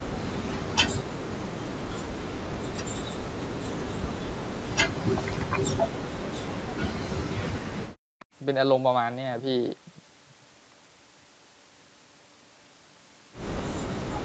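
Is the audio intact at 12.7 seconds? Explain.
Yes, the audio at 12.7 seconds is intact, with no fault at that moment.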